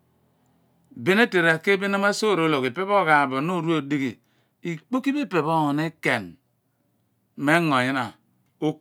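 No technical faults can be heard anywhere in the recording, and the signal holds steady throughout.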